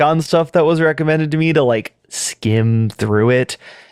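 No technical faults can be heard in this speech recording.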